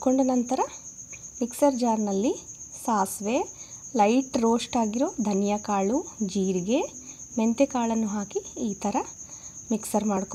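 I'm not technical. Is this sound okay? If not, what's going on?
No. From 8.92 s to 10.17 s there are about seven ticks, one every 0.25 s. These are periodic USB or driver dropouts: something briefly stalls the audio connection on a fixed schedule, and roughly a millisecond of sound is skipped each time.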